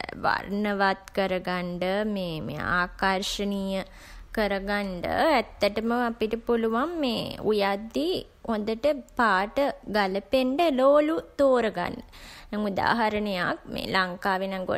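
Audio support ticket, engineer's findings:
Listened to the whole speech recording and found nothing to flag, so no fault to log on this one.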